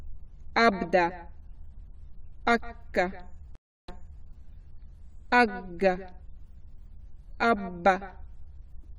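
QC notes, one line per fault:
3.55–4.24 s, stream reconnect: the connection broke and the player reconnected, starting a fresh decoder mid-stream. There are 0.33 s of silence, then the audio resumes 0.36 s earlier than where it stopped, because the server resent a burst, so a short stretch repeats.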